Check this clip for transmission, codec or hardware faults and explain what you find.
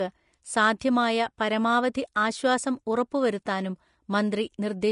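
One codec fault runs through the whole speech clip: Vorbis compression. Nothing remains above 10.6 kHz, and the treble below that is plainly hissy and grainy, with softened attacks. The likely cause is coarse residue quantisation turning fine detail into noise, which fits a rate near 36 kbps.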